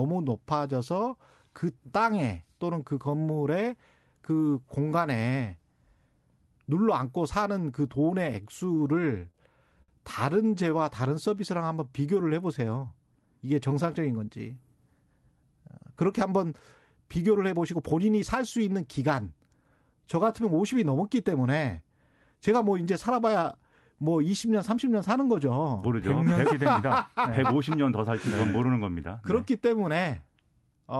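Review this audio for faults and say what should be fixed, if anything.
From 8.65 to 9.36 s the speech stutters: repeated stalls. Packets kept showing up late, the jitter buffer ran dry six times, and each time the receiver stretched the last bit of sound to cover it. That adds up to 81 ms of filler, the longest gap 34 ms, about 11% of that stretch. Nothing is actually lost; it just drags and catches. A larger or more adaptive jitter buffer, or a steadier network path, would stop this.

Right after, at 9.82 to 9.90 s, there's a short stall from a late packet. One packet missed its slot, so the receiver held the previous sound for 59 ms, then picked up exactly where it left off, and the playout delay grew by that same 59 ms. You hear one sound hang a touch too long. Giving the buffer a bit more headroom against single late packets would absorb this.

Then from 10.55 to 13.88 s comes a jitter buffer slow-down. 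The receiver rebuilt its reserve by repeating single pitch periods and slivers of pauses over and over. Altogether it added 244 ms, so the speech runs at about 93% speed with unchanged pitch and sounds a little drawn out. Growing the buffer more gently, or catching up mostly during pauses, would keep this from being noticeable.

From 15.75 to 18.39 s it swings the other way with a jitter buffer speed-up. The buffer ended up holding more than its target, so the receiver trimmed short chunks of one or a few pitch periods in a row, around 300 ms in all. The speech runs at about 109% speed at the same pitch and feels hurried. Shedding excess delay more slowly, and preferably in silences, would smooth that out.

All of this sits on top of an Opus call path whose top end stops around 12 kHz.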